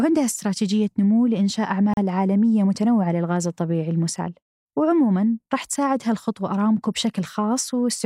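At 1.94 s the speech drops out for about 37 ms and resumes at 1.97 s. This is a gap at a join of encoded pieces: two separately encoded segments were spliced without trimming, so the encoder's start-up delay and the padding in the final frame of the earlier piece both remain as silence. The edges of the cut are smeared by the codec, and the speech continues exactly where it left off.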